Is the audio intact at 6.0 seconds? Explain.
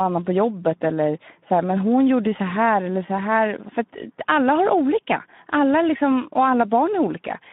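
No. Speex codec damage runs throughout, including 6.0 s. Starved of excitation bits, which fits roughly 11 kbps, the speech sounds hoarse and noisy within a 150 Hz to 3.7 kHz band.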